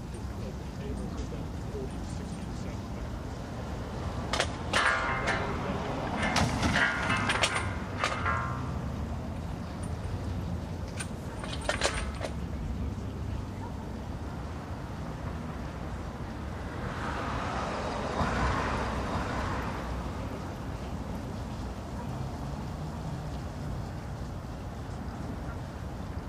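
From 18.58 s to 23.9 s every event is heard twice: a second, full-band copy trails the original by about a second, a few decibels quieter, with no decay or room colour to set it apart, and it begins and ends abruptly. This is a doubled audio track. Because it is so dry and exact, it is not an echo. Likely the same signal was also picked up through a slower path, or an edit left two offset copies stacked together.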